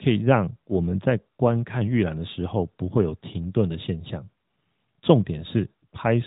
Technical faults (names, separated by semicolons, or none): none